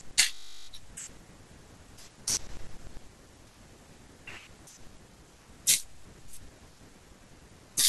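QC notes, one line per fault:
0.34–0.68 s, system hang loop: the speech gives way to a steady, flat buzz pitched at 50 Hz, with no movement in tone for about a third of a second before normal speech resumes. The playback side stalled while the audio hardware kept replaying the same 20 ms stretch of its ring buffer, repeating it 17 times back to back. A piece that short, looped exactly, fuses into a tone at the loop rate instead of a stutter. Little or no speech appears to be lost.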